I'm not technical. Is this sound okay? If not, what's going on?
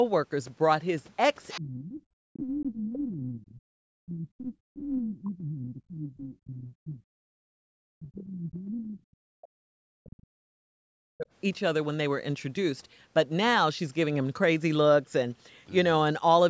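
No. The echo canceller in the call likely failed to clear the other person's voice from the loudspeaker out of the microphone. That is the other side's voice leaking through: a faint scrap of a second voice at 1.49 to 1.6 seconds and again at 2.34 to 2.42 seconds.

While both people were talking at once, the same system likely mistook this talker for echo and turned everything down. That is speech suppressed in double talk. The voice sinks almost to nothing or breaks up from 1.57 to 3.61, 4.03 to 7.03, 7.22 to 9.62 and 9.86 to 11.28 seconds.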